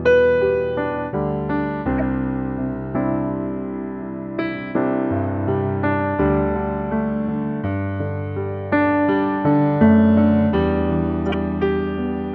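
Around 1.98 to 2.02 s, and again at 11.30 to 11.34 s, there's a corrupt frame decoded: damaged compressed data got played anyway, scattering energy into wrong frequencies. You get a short squeaky blip, with the second one noticeably louder, hitting roughly three frames.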